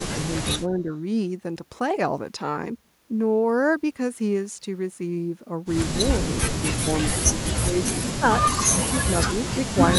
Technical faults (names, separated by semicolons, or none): speech suppressed in double talk